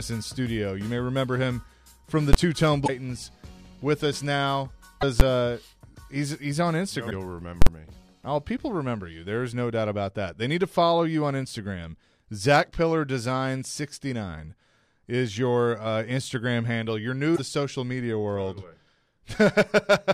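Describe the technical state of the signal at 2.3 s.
Invalid numbers at full scale occur at 2.33 s, lasting about 12 ms, which fits a 512-sample processing block. A calculation inside the processing chain produced infinite or invalid values, and these were forced to the largest positive or negative sample value, so the waveform is pinned at one extreme value, far beyond the audio's peaks, for that whole block instead of carrying the audio. Because the block is so short, the start and end edges merge and the result is heard as a single loud bang.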